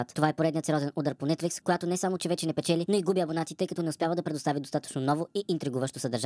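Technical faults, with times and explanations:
Throughout: wrong sample rate. The whole stretch of speech runs about 1.38 times too fast and sits roughly 5.6 semitones high, which fits 16 kHz audio being played back at 22 kHz with no conversion, so speed and pitch rise together.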